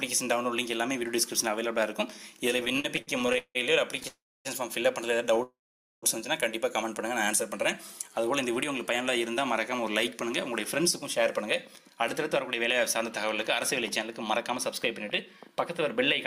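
From 2.57 to 4.06 s the audio has repeated stalls (stutter). Seventeen short gaps are bridged by stretching the last sound forward, about 0.42 s in all, and the longest is 170 ms. Packets were arriving late or too slowly, so the jitter buffer kept running dry, and concealment fills 28% of that stretch. Nothing is lost, but the sound lurches and drags. The stalls are many and brief, which sets this apart from a single freeze.

Two call audio freezes follow, at 4.08 to 4.47 s and 5.43 to 6.04 s. In each, the last sound hangs on as a fading buzz or hiss and then drops to silence, for 0.27 s in the first and 0.48 s in the second. The audio then resumes exactly where it stopped, adding 0.37 s and 0.6 s of delay. The likely cause is packets held up in transit that emptied the buffer. Unlike a dropout, nothing is skipped. Unlike the stutter, each is one long halt.

From 8.09 to 9.82 s a jitter buffer slow-down plays the sound at 95% speed. 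Single pitch periods and bits of pauses are repeated to rebuild a reserve, adding 87 ms. Sounds are drawn out at unchanged pitch. The steady pitch is what separates it from a tape-style slowdown, which would lower the pitch.

Jitter buffer speed-ups run from 11.45 to 13.24 s and from 14.32 to 15.97 s, both at 104% speed. The buffer held more than its target, so it trimmed pitch periods to cut the delay, removing about 70 ms each time. The audio runs slightly faster at the same pitch. This is the opposite of the earlier slow-down, and pitch is untouched, so it is not a pitch shift.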